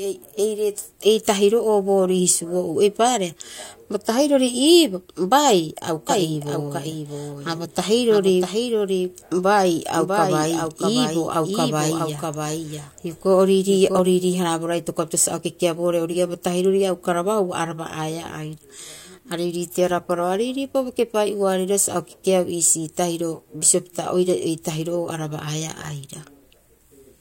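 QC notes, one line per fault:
6.09–13.99 s, doubled audio track: a second, full-band copy of the speech trails the original by roughly 0.7 s at around 5 dB quieter, with no decay or room colour, switching on and off abruptly, likely from a slower second capture path mixed in.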